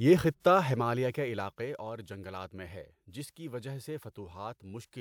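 No technical faults are audible anywhere in the speech.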